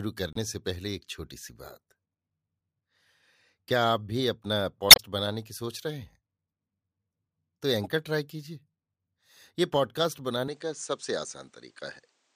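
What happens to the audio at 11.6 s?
At 11.6 s you're inside a stretch from 10.48 s to the end where the input has likely switched to a poorer device. Nothing comes through above 9.5 kHz, a new noise floor sits about 40 dB under the speech, and there's no gap or real level jump at the change.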